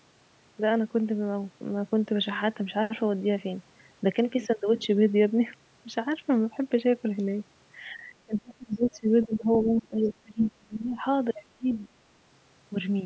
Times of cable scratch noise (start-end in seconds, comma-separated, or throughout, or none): none